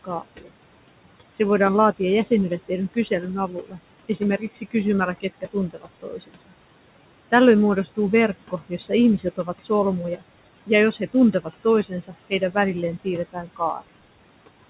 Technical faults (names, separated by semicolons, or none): noise suppressor artifacts; speech cut by the noise suppressor